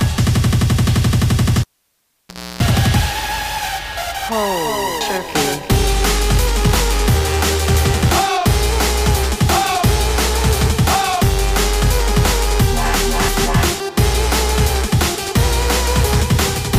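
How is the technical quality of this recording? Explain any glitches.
The recording has one clear glitch. From 1.61 to 2.63 s, the cable is pulled and plugged in. A pop starts near-silence lasting about 0.97 s. Reinsertion brings roughly 0.31 s of 60 Hz mains buzz while only the tip touches. Then another pop as sound returns.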